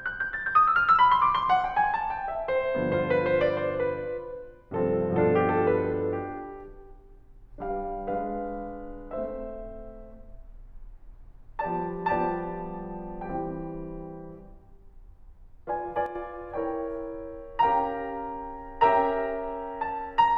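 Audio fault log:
16.06 to 16.15 s, one channel drops out. The music dips abruptly by about 6 dB for 0.09 s, likely because one stereo channel briefly vanished from the mono sum.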